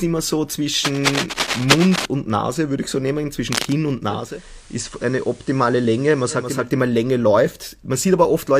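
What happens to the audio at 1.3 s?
At 1.3 s, cable scratch noise covers the speech from 0.84 to 2.06 s, just after "immer so". Dense, uneven scratching sits roughly as loud as the speech, likely from a worn connector being moved so its contact resistance fluctuates. Unlike isolated clicks, it is a dense, irregular rasp of bursts.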